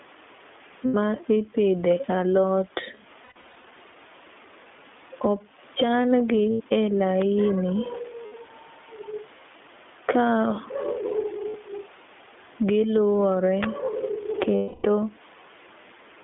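Right from the start the whole thing has that iLBC codec character. The band runs from about 250 Hz up to 3.5 kHz, so it's narrowband telephone sound with nothing bright on top. The coding damage is plainly audible: the speech is clear enough but rough and a bit synthetic. That fits iLBC's 20 ms frame mode at 15.2 kbps, where each frame's excitation is coded on its own. The call's microphone high-pass trimming the deepest bass is normal and sits underneath all this.

Gain pumping is there throughout as well. The level swings by something like 15 dB. The faint room noise rises in the pauses, then gets yanked down whenever the speech comes in loud, so everything sounds squashed and breathing. That's likely the input gain set far too hot with a fast limiter clamping down on each loud syllable.

The first lost iLBC frames hit at 0.86–0.95 s, about 80 ms where the decoder holds the last pitch cycle mixed with noise, giving a short buzzy held vowel. 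Then comes a rougher patch from 3.24 to 3.70 s, 280 ms of losses scattered over 440 ms with runs up to around a tenth of a second. That section stutters and buzzes on and off. More 80 ms dropouts follow at 6.52–6.62 s and 8.26–8.35 s.

Between those, at 7.22 s, there's a sharp snap laid on top of the audio. That's an electrical switching spike, likely a nearby switch or static discharge arcing into the line.

Another lost-frame gap of 60 ms comes at 11.48–11.56 s.

A second switching spike lands at 13.63 s as a tight little snap.

The last and longest concealment runs from 14.56 to 14.87 s, 280 ms that fades into a breathy drone. Because iLBC frames stand alone, the voice snaps back cleanly right after each gap.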